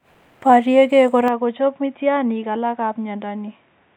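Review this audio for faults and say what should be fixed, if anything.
At 1.28 s the speech abruptly turns dull and boxy and stays that way to the end. Nothing is left above 3.8 kHz, the level falls by about 5 dB, and a faint new background noise appears, with no gap at the change. This is likely an input switched to a poorer device partway through the recording, such as a second microphone or a headset's call profile, which passes a narrower band and has its own tone and noise. To prevent it, fix the input device for the whole session and disable automatic device or profile switching.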